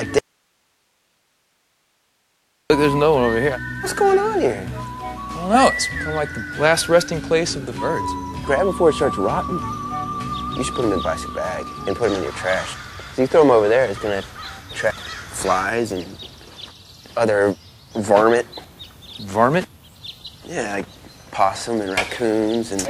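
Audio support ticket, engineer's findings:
Audio dropout to faint residue, 0.19–2.7 s: abrupt cut to hiss about 45 dB down. Waveform near-flat, spectrogram broadband haze. Likely input feed lost, downstream path live.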